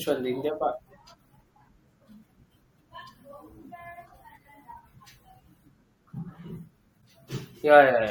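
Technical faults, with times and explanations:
Throughout, MP3 compression: the speech has a watery, swirling quality with dulled treble and smeared consonant attacks. This is likely a low bitrate, around 64 kbps, where the encoder trims the top frequencies and lets weak frequency lines flicker between frames.
7.01–7.03 s, corrupt frame decoded: a brief, faint glitch, around -55 dBFS. Damaged data in a couple of compressed frames was decoded anyway, placing energy at wrong frequencies for the length of those frames.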